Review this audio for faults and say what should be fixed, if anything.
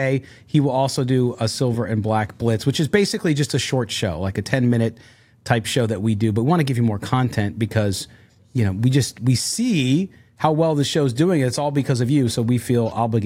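No faults heard; nothing needs fixing.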